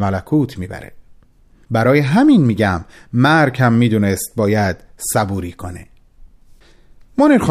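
Speech, with nothing technically wrong with it.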